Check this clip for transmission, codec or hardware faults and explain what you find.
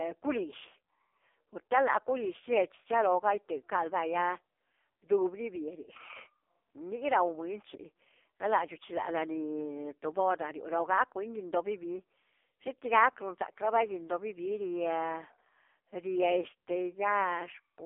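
The speech throughout carries one fault: AMR narrowband mobile codec damage, present from start to finish. The voice sounds thin, buzzy and synthetic, as if relayed over an old mobile call. Nothing is heard above about 3.6 kHz, and the low end falls away below roughly 300 Hz, so sibilants dull and body thins. AMR-NB rebuilds each 20 ms frame from a vocal-tract model excited by a handful of pulses. The heavy artefacts point to one of its low modes, around 5.15 kbps, where too few pulses leave that metallic buzz.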